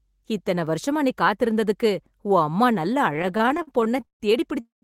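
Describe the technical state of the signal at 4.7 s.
The sound stretches into a fading buzz and then about 140 ms of silence from 4.60 to 4.84 s: a call audio freeze, likely from delayed packets emptying the jitter buffer.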